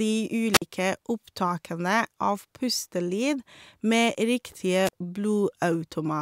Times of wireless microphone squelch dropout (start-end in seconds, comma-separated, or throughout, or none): 0.53-0.62, 4.84-4.93